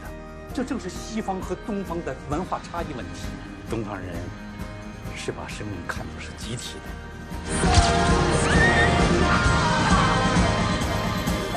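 At 7.37 s the sound shifts character. This is digital radio blending to analogue. The receiver lost its digital stream and cross-faded, over about 165 ms, to the station's FM broadcast. Hiss rises, sitting roughly 30 dB below the signal. The level moves by about 2 dB. At 10.94 s the receiver blends back to digital, and the hiss goes away.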